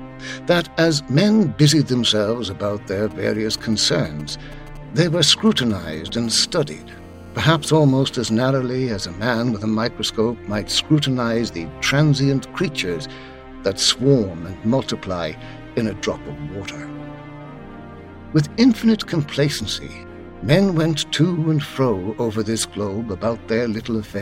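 From 3.11 to 6.19 s, GSM signalling bursts cut through the sound as a galloping dit-dit-dit of ticks and brief buzzes, sitting roughly 20 dB under the signal. A 2G handset close by is exchanging short control transmissions with the network, and the audio circuitry rectifies each radio pulse into the audio band at a repeat rate of 216.7 Hz. The intermittent clustering sets it apart from a continuous hum or a steady interference tone.

From 6.24 to 8.37 s, the same interference settles into GSM phone buzz: a hard, raspy, harmonic-rich drone at 216.7 Hz, about 29 dB below the signal, that holds steady rather than stuttering. Here the phone has moved into a call and transmits its pulses continuously, so the rectified buzz runs without gaps. Unlike mains hum at 50 or 60 Hz, its pitch sits near 217 Hz and its tone is far more gritty.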